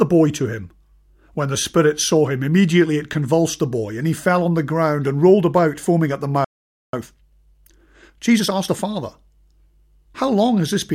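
A playback stall at 6.44 s cuts the speech off right after "about foaming at the", leaving about 0.49 s of silence until 6.93 s. The output simply stops mid-flow, most likely because the player ran dry of buffered data or its audio thread was briefly blocked.

Time-compressed catch-up follows from 6.93 s to 8.87 s, where the speech runs at 1.25 times normal speed without rising in pitch. The player is trimming its backlog by removing short slices and cross-fading across the gaps, which gives a hurried delivery.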